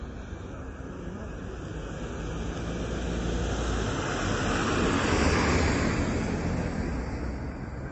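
Throughout the clip the encoder seems to have been starved of bits, most likely by MP3 compression at a low bitrate around 32 kbps. Nothing sounds above 8.3 kHz, and weak frequency lines flicker between frames, giving a plainly audible watery, swirling texture with smeared attacks.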